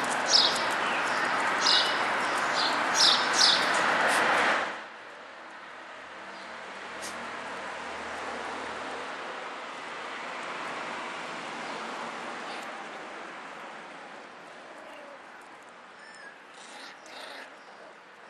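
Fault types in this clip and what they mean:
No fault types are present in this clip.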